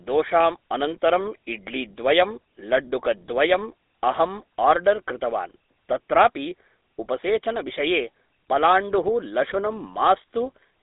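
From start to finish the speech carries GSM full-rate codec damage, plainly audible as a buzzy, gravelly roughness. The codec rebuilds the voice from a vocal-tract model excited by a sparse, regularly spaced pulse train, so fine excitation detail is lost, which fits the 13 kbit/s full-rate scheme. The band runs roughly 250 Hz to 3.7 kHz, with nothing above 3.8 kHz, leaving the sound muffled and thin.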